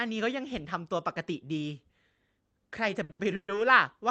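Around 3.03 s the speech hits a short stall from a late packet: the last sound gets stretched for about 60 ms while the jitter buffer waits. Right after, at 3.11 s, a second one holds for about 80 ms, so there's a drawn-out smear with a slight buzz or dip, but nothing is lost.

Then from 3.35 to 3.50 s there's a call audio freeze, likely from packets held up in transit. The last sound carries on as a fading buzz or hiss before dropping to silence for about 70 ms, then picks up where it left off. Everything sits on an Opus call path limited to about 8 kHz.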